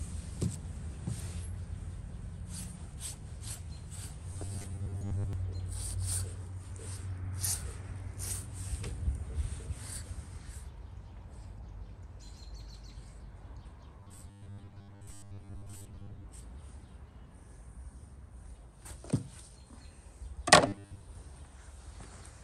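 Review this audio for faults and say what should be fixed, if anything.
Audio likely arrived too seldom, so short 10 ms buffers were replayed. The result is robotic sound from repeated short buffers, with a rigid 100 Hz buzz from 4.33 to 5.33 s, 14.00 to 16.25 s and 20.68 to 21.02 s. Larger input buffering or a steadier delivery schedule should prevent it.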